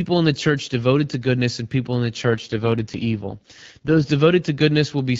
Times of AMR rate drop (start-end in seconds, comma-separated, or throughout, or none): 2.23-4.10